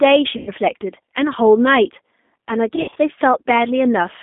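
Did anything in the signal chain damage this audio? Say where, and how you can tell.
Yes. Two stages left their mark: the codec throughout, and the network in two places.

The whole clip has gone through the G.729 codec, and the damage is plainly audible. The speech has the rough, slightly synthetic quality of a low-rate codec that rebuilds each frame from a vocal-tract filter, a pitch predictor and a few pulses, which fits 8 kbit/s. The line band runs from 200 Hz to 3.6 kHz. On a spectrogram, energy stops flat at 3.6 kHz and the band below 200 Hz is empty, with smeared, grainy detail between harmonics.

VoIP packet loss concealed by the speech codec shows up in two places. From 0.37 to 0.52 s, about 100 ms is missing, which fits five 20 ms packets. The decoder keeps repeating its last pitch and filter, so the sound stretches out and fades. From 2.76 to 2.98 s, 120 ms is lost across a 200 ms stretch, with the longest gap 60 ms. 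On a spectrogram, the harmonics freeze into flat horizontal bands. On the waveform, the envelope decays smoothly instead of following the syllables, and it stays low briefly after the losses end.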